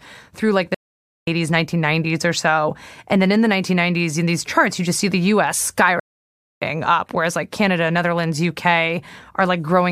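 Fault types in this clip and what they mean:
stream reconnect: connection dropped and a new decoder restarted mid-stream; after "through like the" about 0.5 s silence, then speech resumes skipping roughly 0.4 s, again before "up whereas like".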